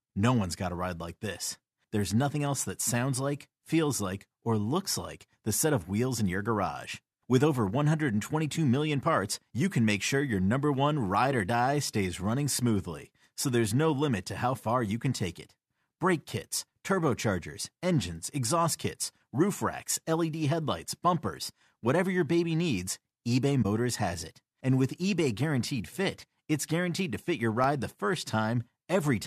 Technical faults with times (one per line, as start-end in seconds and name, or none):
23.62-23.65 corrupt frame concealed
26.91-28.13 CD scratch ticks